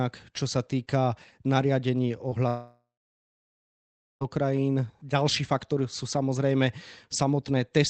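At 2.29 to 2.33 s, a short concealed packet loss: about 20 ms of the call arrived too late, and the receiver extended the preceding sound, leaving a brief smear in the speech.

From 2.47 to 4.23 s comes a long network dropout, likely a stall in delivery. The last sound continues as a fading buzz, followed by about 1.3 s of silence, and speech resumes with that stretch missing. Throughout, the audio stops near 8 kHz, as a narrowed call codec would produce.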